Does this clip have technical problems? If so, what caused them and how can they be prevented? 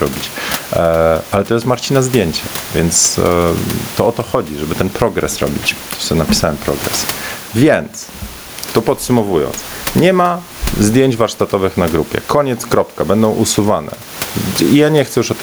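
Yes. Gain pumping runs throughout: the room noise, about 29 dB below the speech, swells by roughly 15 dB in every pause and ducks under each loud sound, likely from input gain set far too high with a fast limiter clamping it down. A waveform shows a flattened envelope with pauses filling up. A spectrogram shows the background band brightening between phrases. Lower the microphone gain so peaks stay well below the limiter's threshold.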